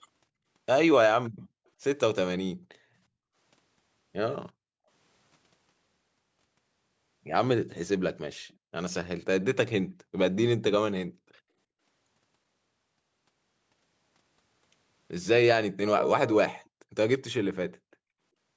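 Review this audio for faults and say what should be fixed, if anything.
The room background vanishes three times, from 2.54 to 3.3 s, from 4.58 to 4.88 s and from 9.85 to 10.18 s, each time falling by about 40 dB into near silence before returning. This is background gated by the echo canceller: while the far end's audio played through the loudspeaker, the canceller clamped the microphone down hard and released it once the playback stopped, so the ambience was cut for roughly three-quarters of a second in the first case and about a third of a second in the others. To prevent it, the echo canceller's suppression should be made gentler, or fitted with comfort noise, so it doesn't mute the microphone outright during playback.

Between 8.49 and 8.56 s there is a very faint, brief ghost of the speech, trailing the original by 375 ms and sitting far below it. That fits an echo leak: one end likely had the call on a loudspeaker, and its echo canceller let a small scrap of what the microphone caught slip through and travel back, which gives the late, quiet copy. 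The speech is band-limited to 8 kHz by the call's microphone processing. To prevent the leak, the loudspeaker end should use a headset, or lower its speaker volume so the canceller can converge fully.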